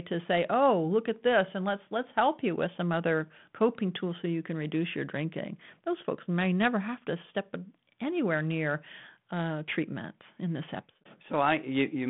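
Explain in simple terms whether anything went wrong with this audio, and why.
Nothing here went wrong.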